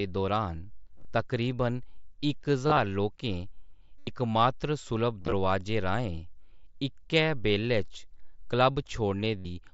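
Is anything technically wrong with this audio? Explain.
Yes. There is concealed Bluetooth headset packet loss at 0.96–1.05, 2.67–2.77, 3.99–4.07, 5.22–5.32 and 9.38–9.45 s, over wideband headset audio limited to 8 kHz. Voice packets between headset and phone went missing, and the receiver filled each gap by repeating a well-matched piece of the preceding waveform. The gaps at 3.99 and 9.38 s are unbroken, so they become a steady buzzy tone held at full level that warbles as real sound resumes. The other three are scattered losses spread over 90 to 105 ms, with runs of up to 30 ms. Plain dropouts would go silent, but these gaps stay filled with sound.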